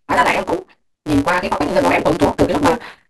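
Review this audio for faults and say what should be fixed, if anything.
There's a block size mismatch (truncated) running through the whole clip. One stage is handing over longer blocks than the next stage reads, and the leftover tail of each block gets dropped. That chopping puts a steady buzz on the speech at 172 Hz, which fits a 256-sample read, and because chunks keep going missing the speech races along at 1.88 times normal speed while keeping its usual timbre. To prevent it, make sure every stage in the chain agrees on the block size, or buffer between them so nothing is discarded.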